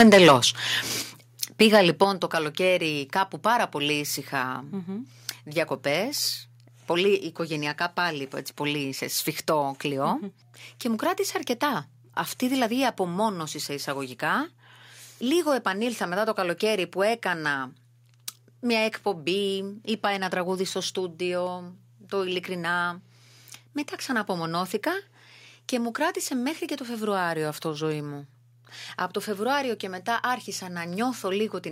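From 0.0 to 0.36 s the loudest syllables crackle harshly, their peaks flattened about 7 dB past the limit across a sizeable share of samples, likely microphone overload from input volume set too high. At 0.02 s and again at 1.02 s the speech and background sink abruptly, by about 2 dB and then about 7 dB, likely the microphone volume stepped down by call software reacting to that clipping. A brief, milder crackle returns from 1.75 to 1.79 s, with peaks just reaching the ceiling on a small fraction of samples, again likely microphone overload. At 2.04 s, just before "το καλοκαίρι κάπου πάρα", the level drops suddenly by about 6 dB, likely a further microphone volume step-down by the software.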